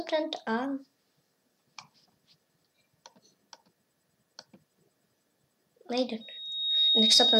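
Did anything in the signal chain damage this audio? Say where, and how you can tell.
Yes. From 6.20 s to the end at 7.39 s there is a loudspeaker feedback squeal, which points to an acoustic loop between a playback loudspeaker and the microphone feeding it. A single tone at 3.8 kHz swells over roughly three quarters of a second and settles about 5 dB above the programme. Loop gain above one at that frequency makes it grow by itself. A steady interference whistle would start at full level, but this tone builds up.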